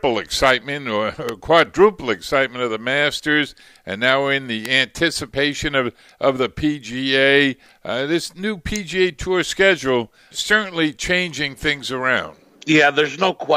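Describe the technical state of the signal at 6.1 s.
At 6.1 s the signal is intact, with no dropout, distortion or other audible fault at that point.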